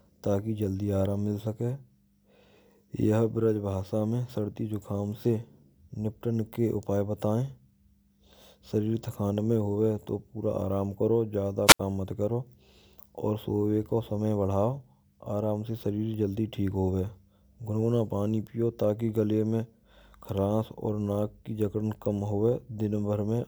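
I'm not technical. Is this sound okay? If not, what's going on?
No. A wireless microphone squelch dropout happens at 11.66 to 11.80 seconds. The radio link from the microphone weakened, so the receiver briefly muted itself: a quick burst of hiss, then about 75 milliseconds of near silence before the speech returns.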